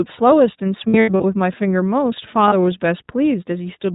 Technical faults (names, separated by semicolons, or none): iLBC codec; lost iLBC frames